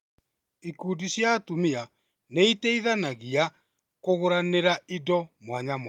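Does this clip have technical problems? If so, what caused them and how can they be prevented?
No, nothing in this speech recording points to a technical problem, so there's nothing here that needs preventing.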